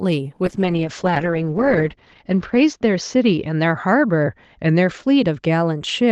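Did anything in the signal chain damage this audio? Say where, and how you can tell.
Yes. From 0.46 s to the end, the speech turns rough and muffled, with high frequencies above 8 kHz gone where they reached 12 kHz before. This is a call bitrate drop: the Opus encoder cut its rate, consistent with a fall from 32 to 8 kbps, lowest for about 1.34 s.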